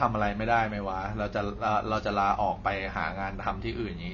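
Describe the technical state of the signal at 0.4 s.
At 0.4 s the speech is in the middle of damage that runs through the whole clip, and it sounds very much like low-bitrate AAC compression is the likely cause. Nothing comes through above about 6.9 kHz, so the top end is cut away. That fits an encoder squeezed to something around 24 kbps, which drops its cut-off and strips or substitutes bands its hearing model rates as expendable. The artefacts are plainly audible: dull, smeared, with a warbling, fizzy edge.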